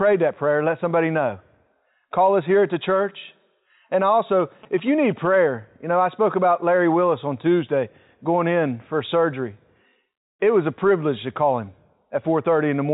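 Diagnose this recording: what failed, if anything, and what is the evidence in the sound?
From 4.40 s to 5.36 s a galloping dit-dit-dit of short buzzes at about 217 Hz sits around 20 dB below the speech, riding over the narrow telephone band that stops near 3.8 kHz. These are GSM signalling bursts, a failure in the analogue wiring stage: a nearby 2G phone exchanging signalling with its network radiates short groups of radio bursts, and the audio circuit rectifies that energy into audible clicks at the burst repetition rate.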